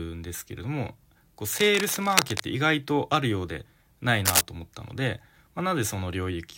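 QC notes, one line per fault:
1.51–2.40 s: cable scratch noise, dense uneven rustling bursts at roughly the speech level, likely from a worn connector being moved; irregular grain separates it from steady hiss or single clicks.
4.25–4.41 s: cable scratch noise again, briefer and louder than the speech, a short scratchy burst of likely fast contact changes rather than one clean dropout or pop.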